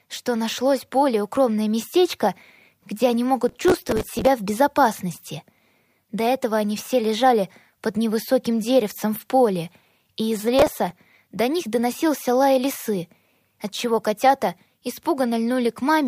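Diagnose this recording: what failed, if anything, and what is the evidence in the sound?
Processor overload crackle, at the driver and buffer stage. A gritty tearing rides on the sound from 3.49 to 4.27 s, and again from 10.59 to 10.91 s. Buffers of a few milliseconds missed their deadlines in a row, each replaying stale audio with hard edges.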